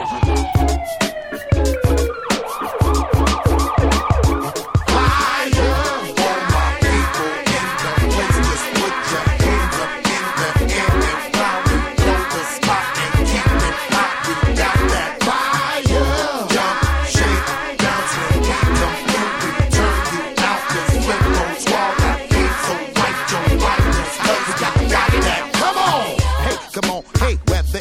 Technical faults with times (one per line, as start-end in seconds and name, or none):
0.53 electrical switching spike